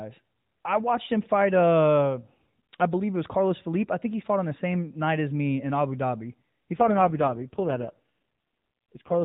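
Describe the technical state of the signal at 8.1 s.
At 8.1 s the speech is inside an AMR rate drop running from 6.74 s to the end, where the codec falls back to fewer bits per frame. The sound turns buzzier and more synthetic, which fits a fall from 12.2 to 4.75 kbps. On a spectrogram the band still stops at 4 kHz with no gap, but the harmonics are smeared and blockier.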